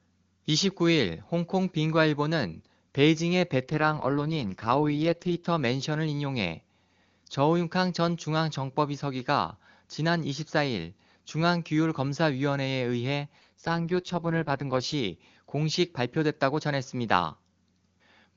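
From 3.62 to 5.48 s, and again from 13.39 to 14.94 s, the speech turns rough and synthetic-sounding without any gap or loss of bandwidth. This is an AMR rate drop: the network steps the wideband codec down to a much lower mode, consistent with a fall from around 23.85 to 6.6 kbit/s, so fewer bits describe the voice. Clarity returns at each end point, when the higher rate resumes.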